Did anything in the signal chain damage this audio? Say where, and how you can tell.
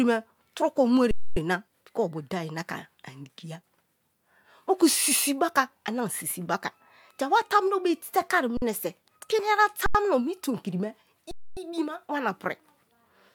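Yes. The speech stops dead four times, freezing rather than dropping to silence: just after "tun ko" from 1.11 to 1.37 s (256 ms), then 8.57 to 8.62 s (48 ms), 9.86 to 9.95 s (85 ms, which fits a 4096-sample buffer) and 11.31 to 11.57 s (256 ms). This is an underrun with held sample at the driver or buffer stage. The output buffer ran empty, and the converter held its last value, leaving the waveform flat with little or no click. Playback resumes where it paused, so each restart is soft.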